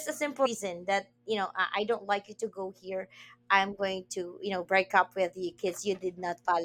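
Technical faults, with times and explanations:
0.45 s, compressed frames skipped: right after "a simple", the speech lurches forward to "that you know", dropping roughly 150 ms of audio, which fits a run of about seven frames of around 21.3 ms each that were either missing from the stream or rejected by the decoder as corrupt.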